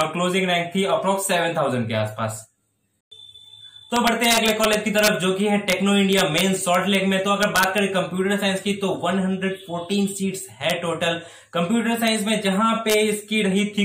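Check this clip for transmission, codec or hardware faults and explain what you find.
Integer overflow shows up in eight places: 0.01 s, 3.96–5.08 s, 5.70–5.73 s, 6.13–6.95 s, 7.43–7.78 s, 10.70 s, 12.08 s and 12.90–12.94 s. Where peaks exceed full scale by up to about 4 dB, the samples wrap to the opposite sign instead of being limited. That produces violent cracks far harsher than clipping, which merely flattens peaks.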